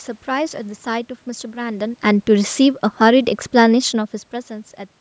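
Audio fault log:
2.06–4.21 s, automatic gain falling: the call's gain control judged the input too loud, or its background noise too strong, and eased its gain down by about 4 dB over roughly two seconds. The room noise sinks along with the speech, which separates it from a talker moving away from the microphone. The level shifts near 1.5 s and 4 s come from the talker's position and not from the gain control.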